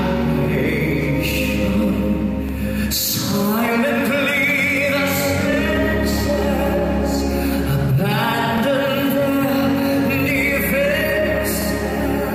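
Overlapping chunks at 2.49, 5.53, 8.58 and 11.62 s: each 3 s chunk starts 44 ms early, replaying that slice of audio as a short stutter.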